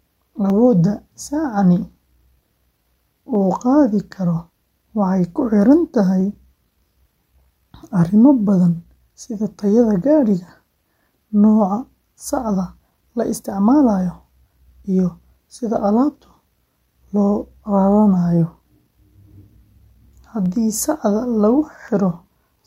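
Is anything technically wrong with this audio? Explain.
Yes. From 0.50 s to 21.88 s there are clock drift buffer slips: roughly fifteen clicks every 1.43 s. Likely, two mismatched clocks, off by around 200 ppm, let the buffer drift until a dozen-odd samples were dropped or repeated, leaving waveform steps and thin, evenly spaced vertical spectrogram lines.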